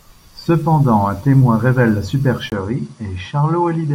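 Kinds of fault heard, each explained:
Input switched to a poorer device: at 2.5 s, after a 20 ms gap, the speech turns duller and about 5 dB quieter, likely from a lesser microphone. The spectrogram loses everything above 10.5 kHz and gains a faint noise floor; the waveform goes flat briefly, then peaks shrink.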